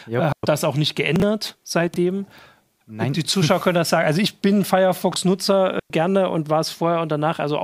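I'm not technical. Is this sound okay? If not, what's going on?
No. There are two kinds of fault. The first is a digital wireless dropout, at 0.32 to 0.43 s, just before "das auch nicht", and again at 5.80 to 5.90 s, just before "und war". Each time the wireless link loses data and the receiver mutes for about a tenth of a second. You hear a clean gap, with no hiss around it.

The second is chunks out of order, at 1.16 to 1.22 s (just after "das auch nicht"), 1.88 to 1.96 s and 5.12 to 5.16 s. A tiny 20-millisecond piece of speech plays one to three pieces late. Those moments sound jumbled.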